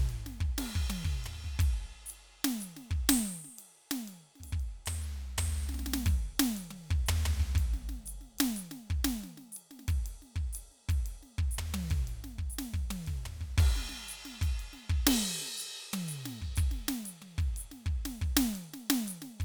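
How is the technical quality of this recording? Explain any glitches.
No technical glitches can be heard in this music recording. The audio runs without any break, disturbance or sudden change from beginning to end.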